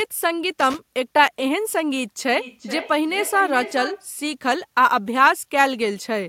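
A speech recording with two separate faults. From 0.60 to 0.79 s there is a short, irregular burst of scratchy crackle, the sound of a loose connector. A worn or dirty contact in the cable or jack was shifting and repeatedly breaking and remaking the connection, chopping the signal into fragments, and any DC sitting on the line turned each reconnection into a click. Then from 2.32 to 4.10 s the speech comes back at itself as feedback echo between two devices. Each syllable returns roughly every 0.4 s, thinner and more ringing, peaking at about 12 dB below the direct speech. Two devices in the same room were joined to one call, so one played out what the other's microphone had sent and that microphone captured it again. Neither echo canceller could remove it, because each cancels only its own device's playback.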